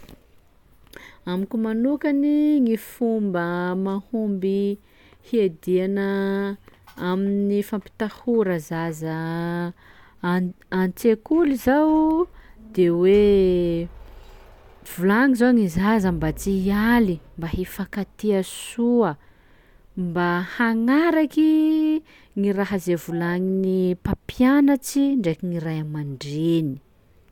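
No technical faults occur at any point in the speech, so there are none to describe in time order.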